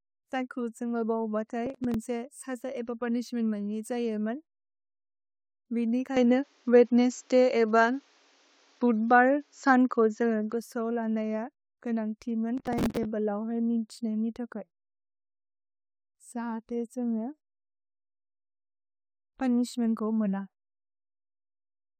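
A speech recording in which the processor twice falls behind its audio deadlines, first from 1.66 to 1.95 s and again from 12.57 to 13.05 s. Each time, buffers go unfilled and the gaps are patched with stale audio, leaving hard-edged repeats. The result is a stretch of processor overload crackle, a gritty tearing laid over the speech. Its texture fits short buffers of roughly 5 ms, with something like ten misses in a row in the first burst and around twenty in the longer second one. From 6.17 to 10.53 s the input was likely switched to a poorer device. With no silence at the changeover, the sound turns dull and narrow, with nothing above 7.6 kHz. The level shifts by about 5 dB, and a new background noise sits roughly 40 dB below the speech until the original input returns.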